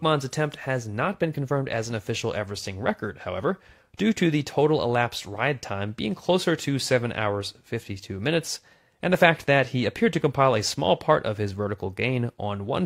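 No technical faults are audible.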